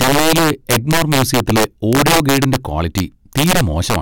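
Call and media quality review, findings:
Violent cracks on louder speech peaks, throughout the clip; far harsher than clipping. Integer overflow in a gain or mixing stage. Signal driven about 7 dB past full scale; a few percent of samples exceed the integer limit and wrap to the opposite sign instead of saturating. Each wrapped peak jumps across the full range, producing the sharp crack. Fix: saturating arithmetic or headroom before the gain stage.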